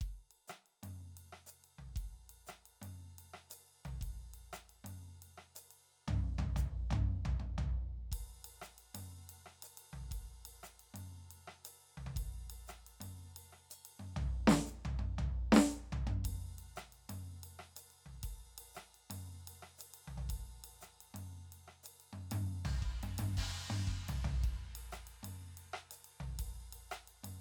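No technical faults are audible.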